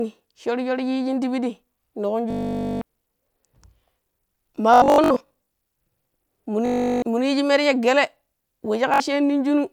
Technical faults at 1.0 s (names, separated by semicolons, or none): none